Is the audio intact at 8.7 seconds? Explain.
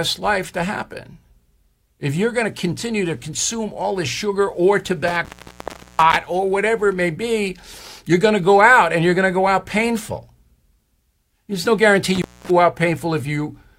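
Yes, the speech at 8.7 seconds is intact, with no dropout, distortion or other fault at that moment.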